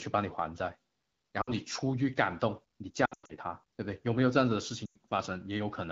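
At 1.41 to 1.51 s you get lost AMR speech frames, about 60 ms where the checksum failed and the wideband decoder reused the last good pitch and vocal tract settings with the gain falling, so the sound drops to near silence within two frames. The worst stretch is 3.05 to 3.33 s, with about 200 ms lost in bursts and the longest run 100 ms, so the audio smears and drops out quickly. At 4.86 to 4.96 s, 100 ms goes the same way.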